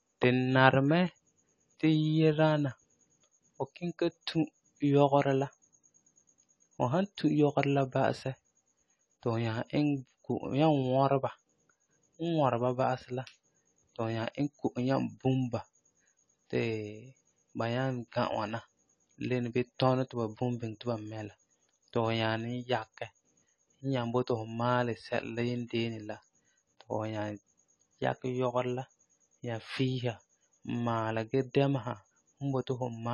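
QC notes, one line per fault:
throughout AAC compression: likely low-bitrate AAC-LC coding, consistent with about 32 kbps, removes everything above 11.5 kHz, leaving the speech audibly dull and smeared.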